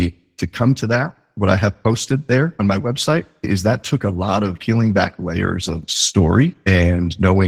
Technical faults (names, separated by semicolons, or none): Opus voice compression